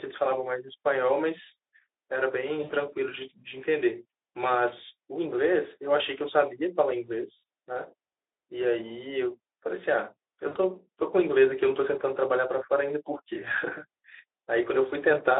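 Speech carried over a narrowband Speex link, with VoIP packet loss concealed by the speech codec at 2.63–2.74 s, 7.37–7.43 s and 10.47–10.56 s. At each gap the decoder keeps stretching its last pitch and filter into a buzzy tone or coloured noise that fades. The gaps cover about 60, 60 and 80 ms, which fits three or four lost 20 ms frames.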